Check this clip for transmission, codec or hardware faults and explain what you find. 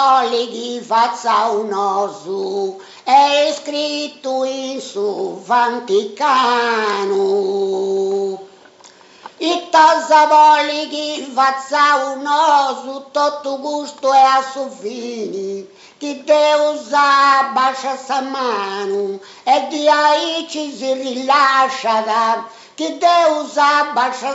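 No transmission, codec or hardware faults.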